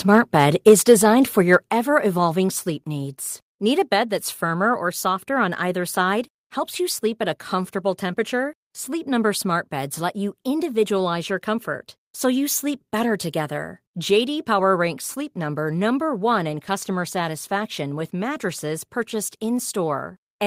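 Microphone volume stepped down at 0.69 s: the level of the speech and the room behind it drops suddenly by about 2 dB, a small step. This is likely the call software reacting to an input it judged too hot and cutting the device's input volume in a single move. It doesn't glide there gradually.

Microphone overload from 1.53 to 1.56 s, just before "ever evolving": a brief peak pushes about 1 dB past the converter's ceiling, so a small share of the waveform has its tops shaved flat. The input volume was likely set too high. The cut peaks give that moment a short, harsh crackle.

Microphone volume stepped down again at 1.68 s, still just before "ever evolving": right after that distorted peak, the level falls by about 4 dB in one step. The likely cause is the software answering the overload by lowering the input volume further, and the whole sound becomes quieter.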